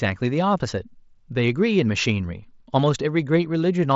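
Nothing stood out on listening to this speech.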